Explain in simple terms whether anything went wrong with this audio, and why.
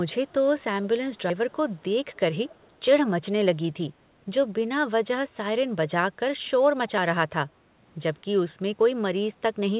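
An echo leak: faint copies of the speech return about 230 ms late at 0.27–0.33, 2.14–2.19 and 2.47–2.7 s, likely because an echo canceller missed some loudspeaker sound.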